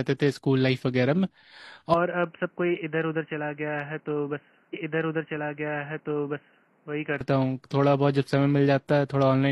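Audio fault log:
1.94 to 7.21 s, input switched to a poorer device: the speech suddenly goes boxy and dull, with nothing above 3 kHz, drops about 5 dB and picks up a new noise floor about 35 dB down. No gap at the change. Most likely the recording jumped to a narrower-band mic or headset.
4.69 to 6.69 s, stream segment repeated: about two seconds of the speech plays a second time, with a small blip where it jumps back. That adds roughly 2.0 s to the running time, which sounds like the player fetched or queued the same chunk twice.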